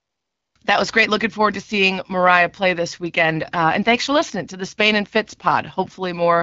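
From 0.00 to 0.55 s, the opening is AMR comfort noise: the sending phone treated the start as silence and transmitted no speech frames, so the receiver generated a smooth, steady synthetic hiss in place of the real background, which then switches out as speech begins. The wideband speech that follows sounds consistent with AMR-WB at 12.65 kbit/s.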